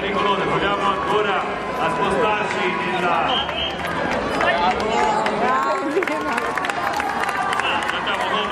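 From 0.07 to 1.97 s a steady ticking sits on top of the sound, about nine sharp pops per second, some twenty in all, each peaking around 5 dB above the audio. This train of clicks is likely interference from nearby equipment or a faulty connection or power supply.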